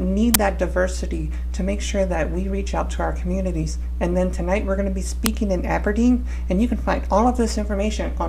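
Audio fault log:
0.34 s and 5.26 s, uninitialised buffer: blocks played before they were filled turn leftover memory into a loud digital noise burst of 11.6 ms and a loud crack of 2.9 ms, fitting 512- and 128-sample buffers.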